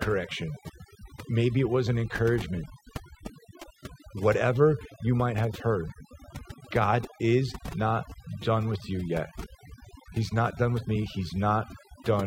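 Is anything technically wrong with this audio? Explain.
Yes. Throughout the clip, the background drops and breaks up into twinkling specks. This is overdone noise removal: an over-aggressive reduction setting cut frequency bands near its noise estimate, taking quieter parts of the voice with them.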